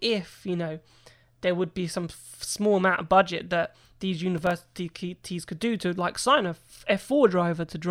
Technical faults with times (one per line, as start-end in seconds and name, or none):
4.38-4.62 processor overload crackle